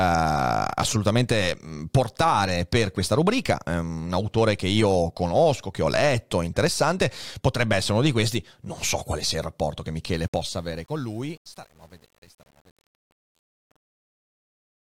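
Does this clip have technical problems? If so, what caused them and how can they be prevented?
Yes, there's truncation distortion on a fade. Right after "sia il rapporto che", at about 10.12 s, the fade-out starts and runs to the end at 14.97 s. From around 10.67 s on it gets worst: the fade stage is keeping too few bits with no dither, so as the level sinks toward the smallest step the waveform collapses into coarse square steps and the tail turns gritty. The graininess fits an 8-bit stage. To prevent it, do fades at high bit depth and dither whenever you reduce word length.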